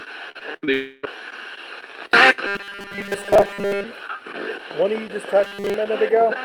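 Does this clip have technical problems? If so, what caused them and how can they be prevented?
Yes, there are four kinds of problem here.

From 0.31 to 0.69 s there's repeated packet loss with a robotic sound. Four gaps, the longest 48 ms, get patched by stretching the last bit of sound, so about a third of that span is filled-in audio and comes out choppy and robotic. A jitter buffer with more headroom or forward error correction would help.

Right after that, from 0.73 to 1.05 s, it's likely a long network dropout. About 300 ms never arrived and was covered entirely by a continued, fading smear of the previous sound, with no true silence, before the audio resumes past the missing part. A steadier connection, such as wired instead of congested Wi-Fi, is the real fix.

From 2.47 to 3.84 s you get robotic sound, likely from repeated short buffers. Most of that stretch is the same tiny chunk looping, which forces a rigid 200 Hz buzz and fits a 5 ms buffer being replayed while real audio is skipped. 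It happens again from 5.44 to 5.74 s, where the whole span is repeats. Larger buffers and less CPU load on the audio thread should prevent it.

From 4.71 s to the end there's a train of clicks, about 7 per second at an uneven pace, peaking a few dB above the sound and ticking through quiet moments too. That's likely interference or a struggling interface, so check cabling, grounding and the USB connection.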